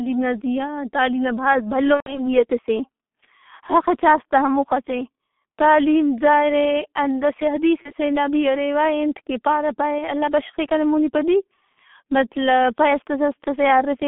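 The whole recording passed through the G.723.1 codec at a low rate, which points to its 6.3 kbit/s mode, working in 30 ms frames over a band limited to roughly 150 Hz to 3.5 kHz. The coder's slow-moving speech model and narrow band strip the top of the spectrum and smear fast changes, so the damage is heavy. The speech is muffled and hoarse, with consonants blurred into one another.

At 1.94 s, just after "تعلیم نا بھاز بھلو", about 120 ms of packets went missing, which fits four lost 30 ms frames. The decoder kept repeating its last pitch and filter at falling gain, so the sound stretches into a fading tone and then, from the third lost frame, goes silent until about 2.36 s. Because each frame builds on the one before, the voice stays weak and distorted for a moment after packets resume.

At 7.83 s, a single 30 ms frame was lost just before "نا بھی روا". Concealment fills the gap with a brief smear that lasts until about 7.93 s.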